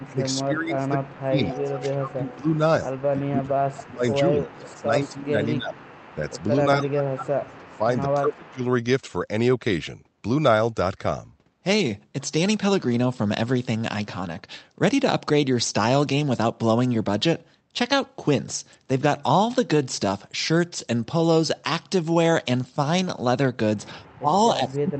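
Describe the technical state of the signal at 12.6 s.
At 12.6 s the speech is intact, with no dropout, click or distortion, only the steady band-limited character of the WebRTC call path, whose codec tops out around 8 kHz.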